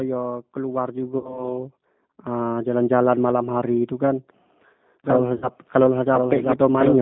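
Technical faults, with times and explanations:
Throughout: G.729 codec. The speech is confined to a narrow telephone band of roughly 150 Hz to 3.7 kHz and has the slightly rough, synthetic texture of a low-rate model-based coder, which points to 8 kbit/s G.729A. The decoder rebuilds each 10 ms frame from a vocal tract filter, a pitch predictor and a handful of pulses. Because the speech is only approximated from this model, the damage is plainly audible.
1.18–1.52 s and 5.36–5.49 s: VoIP packet loss concealed by the speech codec. Each event begins with about 60 ms of missing audio, which fits three 20 ms packets. The decoder fills the gap by repeating its last pitch and filter at falling gain, so the sound smears into a short buzzy tone or coloured noise that fades. Because each frame builds on the previous one, the audio stays weak and distorted after packets resume. This recovery is longest in the first event, where the disturbance runs to about 1.52 s.
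5.04 s to the end: doubled audio track. From 5.04 s a second, full-band copy of the same audio sits underneath, about 1 s behind and roughly 5 dB quieter. It starts abruptly and carries no decay or room colouring, which rules out a natural echo. The likely cause is a second capture through a slower path, or an edit that left two misaligned copies, so earlier material is heard overlapping the current speech through to the end.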